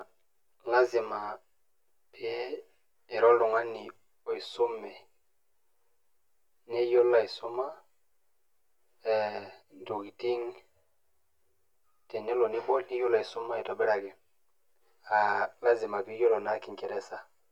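From the start of the clip to the end, the speech carries channel delay (comb filtering). One channel arrives roughly 10 ms behind the other, and when the pair is folded to mono the shared signal cancels at regularly spaced frequencies: the first notch sits near 50 Hz, with further notches about every 100 Hz above it. The result is a constant hollow, phasey coloration, with the notches fixed in place rather than sweeping.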